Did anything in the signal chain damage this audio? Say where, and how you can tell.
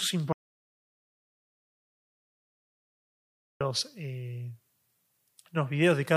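Yes. An audio dropout to silence runs from 0.33 s to 3.61 s, taking out about 3.28 s of the speech. The sound cuts off abruptly and then resumes mid-flow, and the gap between is silent, with no room tone or noise floor at all. That points to the input stage rather than the acoustics: the likely cause is a lost capture path, such as a disconnected device, a failed link or a stray mute, while the recorder kept writing silence.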